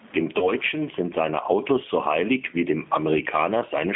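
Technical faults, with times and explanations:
Throughout, gain pumping: the faint room background sits well below the speech, and loud and soft parts are pulled closer in level, with level swinging by roughly 15 dB, so the sound is squashed. The likely cause is input gain set far too high, with a fast limiter clamping every peak.
Throughout, G.729 codec: the speech is confined to roughly 200 Hz to 3.5 kHz and has a rough, slightly synthetic texture. This fits an 8 kbit/s model-based coder that rebuilds speech from a filter, a pitch predictor and a few pulses per frame.
0.39 to 0.51 s, VoIP packet loss concealed by the speech codec: a 20 ms gap, which fits a single lost packet, is filled by the decoder repeating its last pitch and filter at falling gain. The result is a brief buzzy tone or coloured noise that fades, and the speech stays weak or distorted after real packets return.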